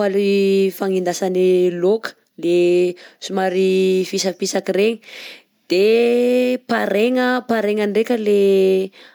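Speech recording; no technical faults can be heard.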